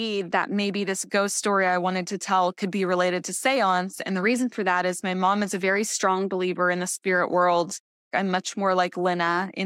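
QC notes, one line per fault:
No faults detected.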